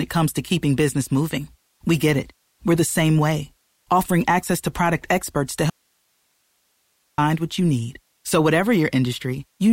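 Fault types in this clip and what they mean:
Audio dropout to a faint residue: The speech cuts out abruptly at 5.70 s and returns at 7.18 s, about 1.5 s later. The gap holds only faint hiss, far below the speech level. The signal was likely lost while the path stayed live.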